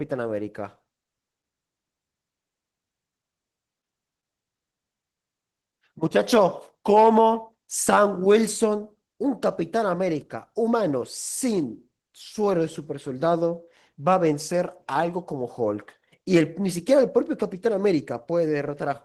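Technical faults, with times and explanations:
Throughout, Opus voice compression: the speech has a hoarse, slightly robotic grain from coarsely coded excitation, coded in hybrid mode with the full band kept. That plainly audible damage fits a bitrate around 16 kbps.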